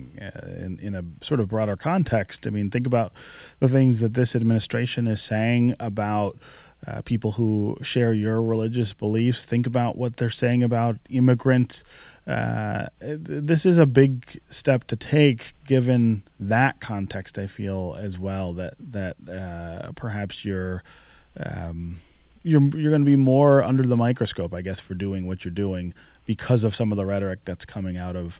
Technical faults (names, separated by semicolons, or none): none